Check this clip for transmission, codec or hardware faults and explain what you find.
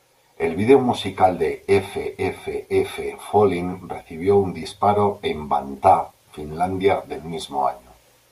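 No faults detected.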